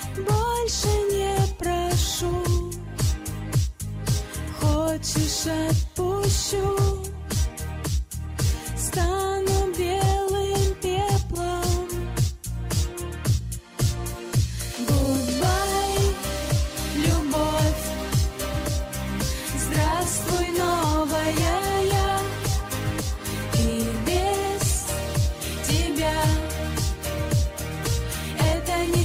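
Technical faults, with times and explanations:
No technical faults are audible anywhere in the clip.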